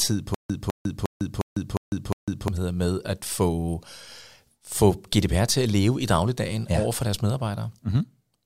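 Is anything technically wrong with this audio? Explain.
Yes. From 0.34 to 2.48 s the speech breaks into a stutter with silent gaps. A short fragment of about 205 ms plays, then about 152 ms of dead silence, repeating six times at a steady 356 ms period before normal speech resumes at "med at få". The likely cause is a stalled stream replaying its last buffered fragment at each retry, so the audio meant for that stretch is lost. On a waveform and spectrogram this shows as identical blocks separated by flat, empty gaps.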